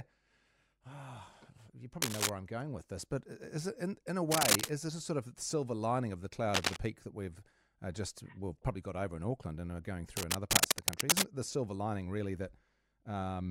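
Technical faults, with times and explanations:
2.02–2.29 s, 4.31–4.70 s, 6.54–6.77 s and 10.16–11.22 s, cable scratch noise: dense, ragged bursts of scratching sit roughly 5 dB above the speech, just before "I'm going with this", between "silver lining of the" and "peak that we've uh", and, for over a second, between "and are going" and "it the silver lining". The likely cause is a worn cable or connector being moved, its contact resistance jumping erratically and injecting uneven noise over the signal.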